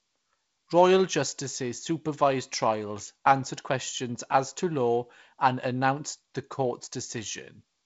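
No faults found in the speech; the band stops near 7.7 kHz with a light upper-band hiss, consistent with G.722 wideband telephone coding, and the slightly grainy lower band points to its 48 kbit/s mode.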